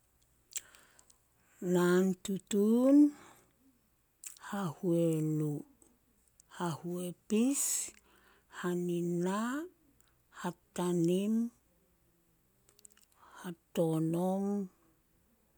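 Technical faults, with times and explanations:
Nothing in this speech recording stood out as a technical problem on listening.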